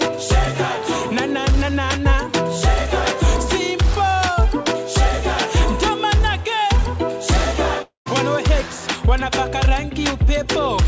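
From 7.82 to 8.08 s, the sound smears into a fading buzz, then silence. A long network dropout is the likely cause, losing 0.24 s of audio.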